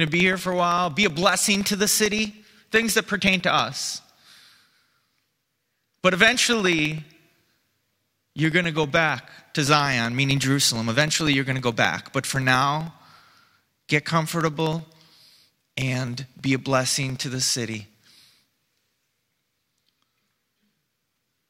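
From 0.07 s to 21.39 s the speech carries periodic USB or driver dropouts. Every 0.064 s, about 15.6 times per second, something stalls the USB bus or audio driver and roughly a millisecond of audio is lost and replaced with silence, around three hundred gaps in all. Each one is heard as a small tick. The ticks follow a steady rhythm while the voice is sounding and disappear in pauses, where the gaps have no signal to interrupt.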